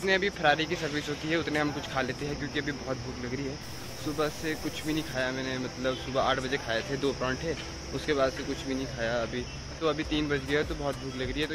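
From 3.63 to 5.13 s the sound turns grainy, with signal-following distortion roughly 20 dB down, likely low bit depth without dither, fitting 6-bit truncation.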